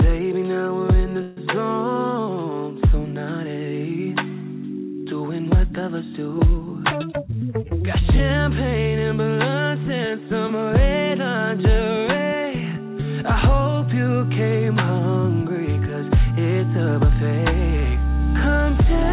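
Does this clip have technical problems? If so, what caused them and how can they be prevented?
Yes. There is a call audio freeze from 1.22 to 1.39 s. For about 150 ms the last sound is stretched into a fading buzz or hiss, never dropping to silence. Then the audio resumes where it stopped. Nothing is lost, but a gap is inserted and the stream now runs about 150 ms later. The likely cause is delayed packets leaving the jitter buffer empty. Prevention: reduce network congestion and prioritise call traffic with QoS marking.

The second fault is a jitter buffer speed-up from 7.12 to 8.37 s. The audio runs at about 111% speed with its pitch unchanged, so it sounds hurried. The receiver was holding more audio than its target, which fits the backlog left by the earlier stall. To shrink the delay, it cut many tiny pitch-period slices, removing roughly 150 ms in total. The G.711 mu-law path underneath carries nothing above 4 kHz. 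Prevention: keep packet delivery steady so the buffer never builds a backlog that must be drained quickly.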